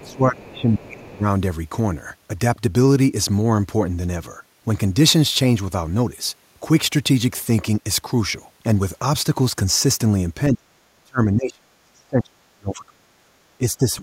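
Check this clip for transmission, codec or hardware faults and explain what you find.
Two echo-cancellation faults are audible. Speech is suppressed in double talk from 0.0 to 1.25 s, 10.5 to 10.71 s, 10.94 to 13.3 s and 13.59 s to the end. The level sags by up to about 25 to 35 dB, and about 10 dB in the last stretch, likely because the echo canceller mistook this side's talk, overlapping the far end, for echo and attenuated everything.

The other side's voice is leaking through briefly from 0.04 to 0.12 s, a faint scrap about 30 dB below the speech. This is likely residual loudspeaker echo that the canceller failed to remove from the microphone signal.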